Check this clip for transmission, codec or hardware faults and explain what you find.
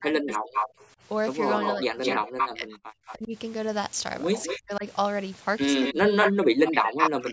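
Two echo-cancellation faults run through this speech clip, recurring in four overlapping episodes.

Echo leak, at 0.29 to 0.86 s, 1.51 to 3.14 s, 4.33 to 4.61 s and 5.81 to 7.27 s: the far end is most likely on a loudspeaker whose echo canceller let part of the returned signal through. A delayed copy of the speech trails it by 212 ms, roughly as loud as the original in the first and last stretches and noticeably quieter in between, giving a doubled, slapback quality.

Speech suppressed in double talk, at 0.00 to 0.47 s, 1.76 to 3.34 s, 4.52 to 4.85 s and 5.93 s to the end: with both sides active, the canceller likely could not tell the near talker from the loudspeaker echo and attenuated everything. The speech sinks sharply, in the worst spots almost to silence, and breaks into fragments, overlapping each echo episode. The call's microphone processing, with nothing above 8 kHz, sits underneath both faults.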